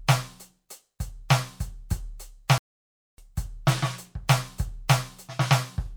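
A playback stall hits this music clip from 2.58 to 3.18 s, where the sound cuts out mid-flow and leaves about 0.6 s of silence before the music returns. The player most likely ran short of data or had its output thread blocked until it recovered.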